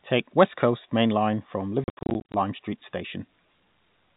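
Packet loss filled with silence runs from 1.84 to 2.34 s. Across that half second, about 290 ms of the speech simply vanishes, broken into scattered gaps rather than one hole. The longest single dropout is 70 ms. The receiver inserted silence wherever data failed to arrive, so the sound cuts in and out with abrupt edges. The gap sizes suggest packets of roughly 10 ms. Around these holes, the G.711 telephone coding keeps everything below 4 kHz.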